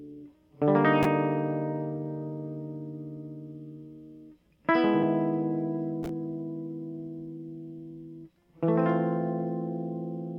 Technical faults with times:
5.02 compressed frames skipped

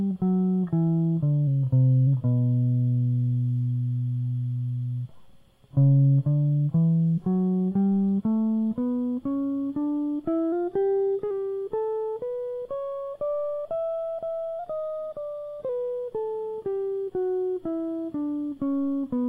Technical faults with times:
1.47-2.07 drift correction step
10.52-11.31 drift correction step
14.59-15.69 drift correction step

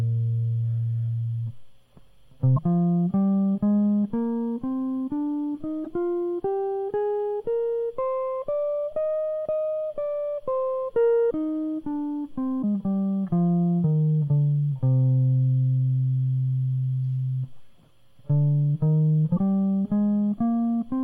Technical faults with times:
2.53-2.58 damaged data in a compressed stream
5.82-5.87 damaged data in a compressed stream
11.27-11.32 damaged data in a compressed stream
12.59-12.64 damaged data in a compressed stream
19.36-19.39 damaged data in a compressed stream

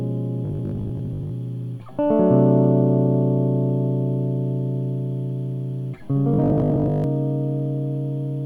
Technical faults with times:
0.45-1.31 robotic sound from repeated short buffers
6.34-7.04 robotic sound from repeated short buffers

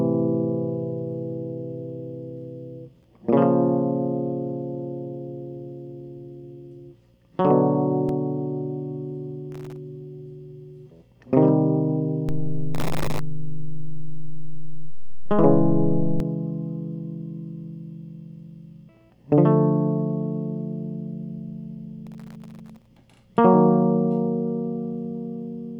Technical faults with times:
9.52-9.78 processor overload crackle
12.29-16.20 DC step
12.75-13.19 processor overload crackle
22.07-22.97 processor overload crackle

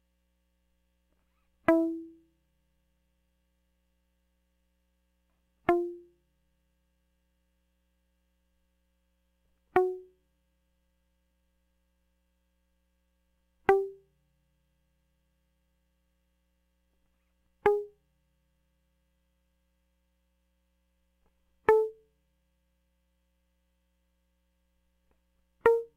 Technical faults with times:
0.00-25.97 sample clock jitter

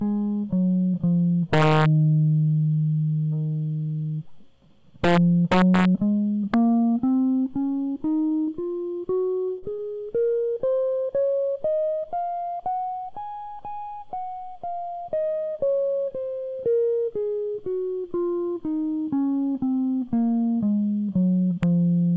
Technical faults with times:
1.53-1.86 integer overflow
5.04-5.85 integer overflow
6.54 integer overflow
8.08-11.07 repeated packet loss (robotic sound)
21.63 integer overflow

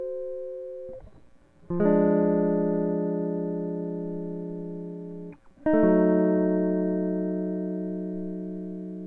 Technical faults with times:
none

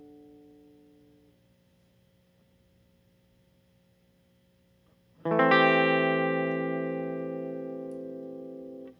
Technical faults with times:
none

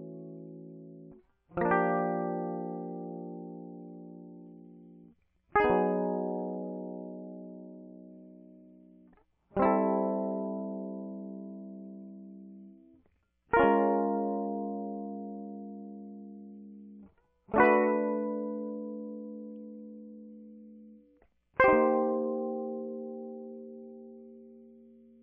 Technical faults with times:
none

